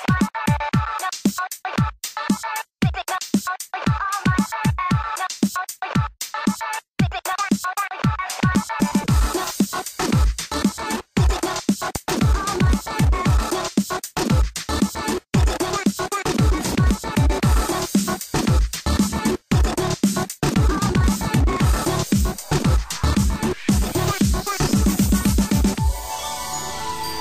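The audio has two loud pop faults. A single pop lands at 8.55 to 8.58 s. A double pop follows from 11.96 to 12.19 s. Each peaks around 15 dB above the sound, which carries on underneath. The likely cause is a sudden voltage step from a plug, switch or static.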